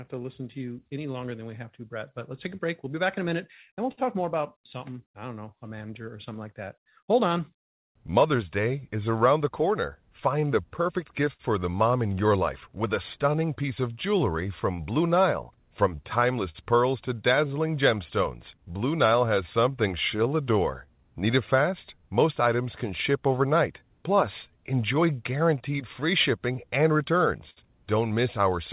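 Clock drift between sender and receiver runs through the whole recording: the sender's clock is slower, by roughly 5 percent, so the jitter buffer keeps draining. The receiver has to make up the shortfall continually, leaving small, unevenly spaced timing hiccups in the speech, which arrives over a telephone-band path with nothing above 4 kHz.

Repeated timing corrections follow from that from 0.15 s to 28.5 s. The receiver keeps stretching the audio with short repeated pieces, running it at about 96 percent speed and adding roughly a second overall. The speech runs slightly slow.

A short stall from a late packet occurs at 3.92 to 3.99 s, again at 11.33 to 11.41 s, and at 27.50 to 27.59 s. Each time the buffer ran empty and the last sound was held, for 56, 59 and 63 ms, before continuing. Nothing is lost, but a sound hangs on with a faint buzz or dip.

Scattered short gaps fall between 15.56 and 18.71 s. 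About five packets went missing or late, and each hole was patched by continuing the previous sound, roughly 100 ms in all, the longest about 50 ms. Brief smears and ticks break into otherwise continuous speech.

A repeated buffer comes at 28.70 s. New audio failed to arrive, so the device replayed its last block once, about 10.7 ms long, which fits a 512-sample buffer. The hard join at the repeat gives a quick click or buzz.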